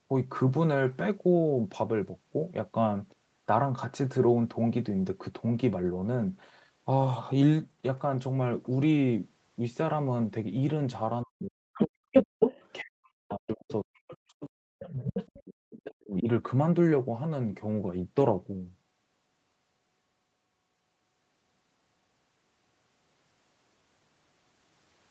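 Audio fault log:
11.24–12.42 s, 12.82–15.03 s and 15.40–16.28 s: speech suppressed in double talk. The talker's speech dips by as much as about 40 dB and breaks up in pieces, roughly 3.5 seconds in total. The likely cause is an echo canceller that could not separate near-end speech from loudspeaker echo while both sides talked, so it attenuated everything.
11.74–12.72 s, 14.10–14.14 s, 14.82–15.39 s and 15.72–15.94 s: other side's voice leaking through. A second voice comes through the microphone in short scraps. In the first stretch it is somewhat louder than the talker, and later it falls to about 5 to 20 dB below the talker's level. This is likely residual far-end echo that the canceller left in the microphone signal.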